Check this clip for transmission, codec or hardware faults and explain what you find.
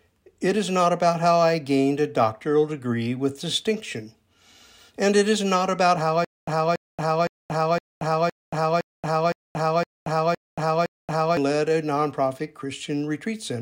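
One fault: a stutter with silent gaps from 6.25 to 11.37 s. The player or stream likely stalled, and on each retry it replayed the last buffered fragment before running dry again. The sound becomes a 283 ms burst repeated ten times at an even 513 ms pace, each burst followed by 229 ms of dead digital silence. The real audio that should have filled those five seconds never arrives and is simply lost.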